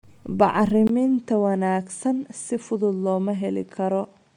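A speech clip carrying plainly audible Bluetooth LC3 compression from start to finish, likely from an LE Audio link. A grainy, breathy edge sits on the voice even though content reaches about 20.1 kHz, which fits roughly 48 kbps with 10 ms frames. Unlike a bandwidth fault, the damage is texture rather than lost top end. At 0.87 s a 20 ms silence marks the input switching to a poorer device, likely another microphone or a headset's call profile. From then to the end the band stops near 9.7 kHz, the level falls by around 5 dB, and a new noise floor appears roughly 40 dB down. That abrupt, gapped change in tone and noise separates it from codec artefacts, which stay constant across the clip.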